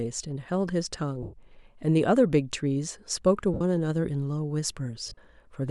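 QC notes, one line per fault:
1.23–1.34 s: lost LE Audio frames, a 105 ms gap where the LC3 decoder repeats the last spectrum with random signs, turning the sound into a noisy smear.
3.54–3.61 s: lost LE Audio frames, 67.5 ms concealed by re-using the previous spectrum with scrambled signs, producing a brief hissy blur in place of the speech.
5.07–5.18 s: lost LE Audio frames, losses totalling 82.5 ms spread over 105 ms, with the longest run around 30 ms, giving intermittent smeared, noisy patches as concealment repeats.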